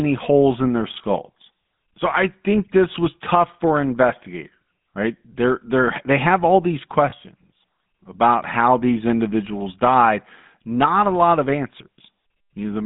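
From start to finish the speech has the gritty, buzzy texture of the GSM full-rate codec, which fits a 13 kbps full-rate stream. The codec rebuilds the voice from a vocal-tract model driven by a sparse, regularly spaced pulse train, so the fine detail of the excitation is gone and you get that gravelly edge. The band sits at roughly 150 Hz to 3.6 kHz, and the codec damage is plainly audible throughout.

There are two brief glitches from lost GSM frames. The first runs from 7.10 to 7.13 s, right after "they have all these". The second runs from 9.58 to 9.61 s, after "about how these" and just before "died not a lot". Each sounds like a single 20 ms frame dropped. The decoder fills the gap by reusing the last good frame, so each one comes through as a short, rough, metallic ring rather than a clean dropout.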